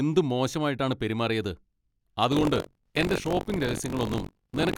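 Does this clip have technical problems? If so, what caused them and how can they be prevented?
Yes. From 2.30 s to the end of the clip there is buffer tearing. The software filling the output ring buffer and the hardware draining it have drifted out of step, so their positions cross inside every period. In each buffer, roughly a sixth of the samples are stale audio from about 40 ms earlier, spliced in with hard edges on both sides. That repeats at 46.9 Hz, which fits a 1024-sample buffer, and it lays a steady robotic buzz over the speech. Keeping the writer safely ahead of the read pointer, with proper period synchronisation and underrun detection, prevents it.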